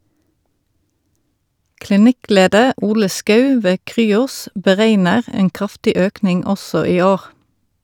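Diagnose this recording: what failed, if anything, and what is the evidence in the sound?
Nothing in this recording failed.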